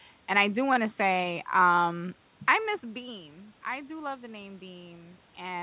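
No technical fault is present: the speech carries the band-limited sound of a telephone-grade call codec with nothing above 4 kHz, which fits narrowband G.711 A-law coding, over room noise sitting about 37 dB below the speech, and the level shifts near 2.5 s and again near the very end come from the talker moving relative to the microphone.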